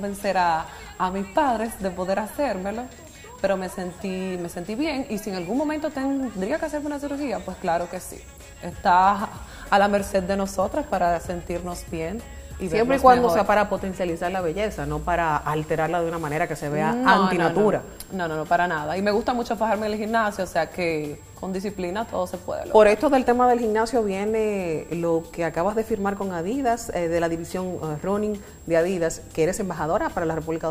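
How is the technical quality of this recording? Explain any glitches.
The recording has one fault, present for its whole length: a switching supply whistle. A thin, high tone sits under the sound from start to finish, wandering between about 7.5 and 7.8 kHz and roughly 30 dB below the programme. A switching power supply near the signal path is running in an audible burst mode, or beating against a second supply, so its frequency moves as the load shifts and the pitch drifts.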